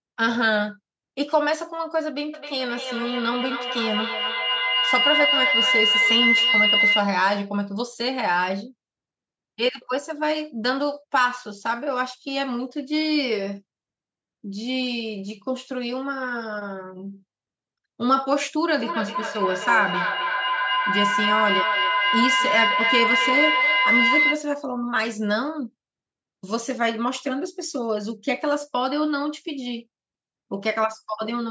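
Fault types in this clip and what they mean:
Feedback howl, 2.34 to 7.16 s and 18.8 to 24.5 s: sound from a loudspeaker re-enters a microphone on the same call and returns louder on each trip, so the repeats grow rather than decay. The loop narrows to a tone near 2 kHz that pulses roughly every third of a second, the round-trip delay. The first howl peaks about 3 dB above the speech, the second about 2 dB.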